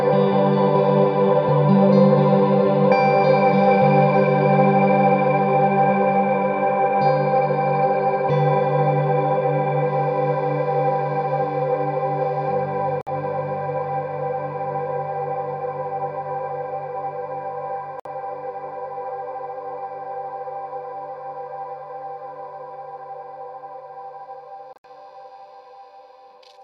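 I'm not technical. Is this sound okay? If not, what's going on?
No. The sound briefly cuts to silence at 13.01 to 13.09 s, 18.00 to 18.06 s, and in a broken cluster from 24.73 to 24.87 s. That is likely a Bluetooth dropout. Unlike a stall, nothing waits: the sound jumps ahead, skipping what should have played.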